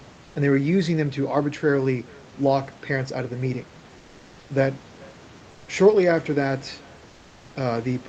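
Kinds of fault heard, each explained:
Echo with no canceller: The far end is playing the call through a loudspeaker, and its microphone sends that sound straight back with nothing removing it. Here the speech returns after roughly 0.4 s as a faint copy, about 28 dB below the original. It sounds thinner than the direct voice. Because the delay is long, it trails each phrase as a separate shadow. It does not blur into the voice. It runs through the whole clip.
Comfort noise in place of the background: In pauses the real room noise drops out and is replaced by a smooth, even hiss with none of its detail. This happens from 3.97 to 4.45 s and again from 7.09 to 7.45 s. The fill is about 2 dB and about 3 dB quieter than the background it replaces. The likely cause is the sender's voice detector halting transmission in silence, with the receiver generating synthetic noise until speech resumes.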